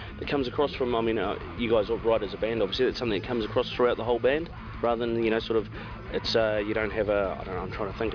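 Nothing here calls for comment: the audio runs its whole course without any technical fault turning up along the way.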